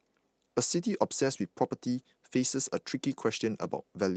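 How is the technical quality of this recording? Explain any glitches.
The recording has one brief glitch, a lost packet rebuilt from error correction, heard as a patch of roughened speech with no gap or dropout. Across the whole clip the sound stops at about 8 kHz, the band limit of the call codec.

From 1.23 to 1.29 s the speech turns grainier and noisier for roughly 40 ms. That fits two 20 ms packets going missing. Each following packet carried a coarse, low-bitrate backup of the lost one, and the decoder played those backups, so nothing drops out. The cost is the rough, hissy texture of the substitute frames, below the surrounding speech.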